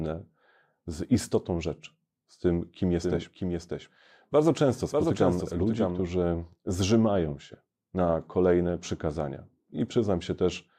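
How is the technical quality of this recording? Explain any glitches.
The recording has one glitch, a doubled audio track between 3.03 and 6.07 s, starting just after "rzeczy z tym kim" and ending just before "zrzymają się na kolejne". A second full-band copy of the speech runs about 0.7 s behind the original and roughly 5 dB quieter, likely because the audio was captured twice through a slower path or an edit left two copies out of step. Unlike a room echo, the trailing copy has no decay and no reverberant colour. It switches in and out abruptly, so the overlap sounds like two identical takes talking over each other.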